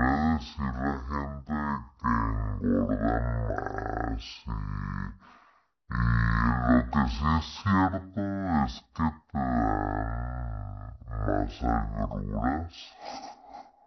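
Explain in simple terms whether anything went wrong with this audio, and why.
The speech plays at half speed and a full octave low throughout. This is stereo read as mono: left and right samples were strung together as one channel.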